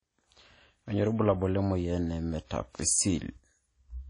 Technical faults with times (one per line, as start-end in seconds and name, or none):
0.00-4.09 WMA compression